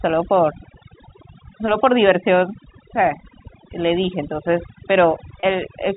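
Throughout, the voice sits against near silence with twinkling specks, the mark of overdone noise removal cutting bands near its noise estimate. At 5.40 to 5.43 s a brief held, buzzy note appears: packet loss with pitch repetition, the last pitch period repeated across a 30 ms gap.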